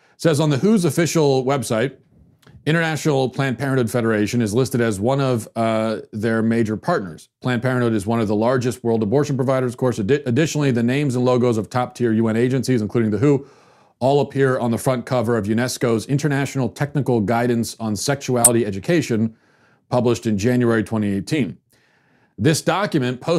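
Right around 18.42 s, running to 18.48 s, there's a corrupt frame decoded in the speech, a brief chirp, squeak, blip or burst of noise lasting about 60 ms. What happened is that some bits inside the compressed data got flipped, and the decoder went ahead and played those frames anyway, so misread gains and codes threw energy into the wrong frequencies. The damage spans what sounds like roughly four frames, and it's loud, peaking somewhere near -5 dBFS.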